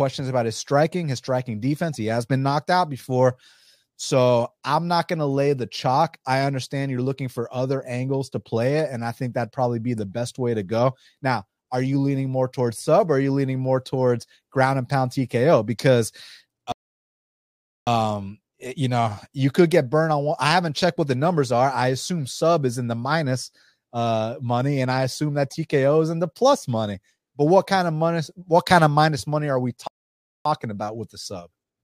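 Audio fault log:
16.72–17.87 s, rebuffering stall: the speech cuts to silence for 1.15 s, then resumes exactly where it stopped, because playback ran dry and waited for more downloaded audio.
29.87–30.45 s, rebuffering stall: just after "minus money are we", a 0.58 s silence, then the speech continues seamlessly; nothing is lost, but the emptied buffer adds time.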